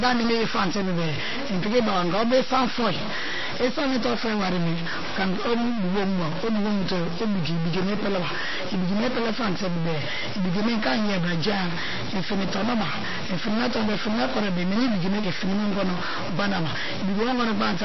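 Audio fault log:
Throughout, stuck bit: one data bit in the converter or its wiring is likely held at a fixed value, so about half the samples land off by that bit's weight in a pattern that follows the speech waveform. The result is a distortion riding on every syllable, and because the stuck bit also flips with the sign of small values, the pauses between phrases fill with noise instead of falling silent.
Throughout, MP3 compression: the encoder was likely starved of bits, and the sound fits a rate around 24 kbps. With so little to spend, it removes all content above 5.8 kHz, leaving the speech dull and muffled, and zeroes weaker frequency lines that switch on and off from frame to frame. That gives a plainly audible watery, swirling texture, with metallic chirping on s sounds and smeared consonant attacks.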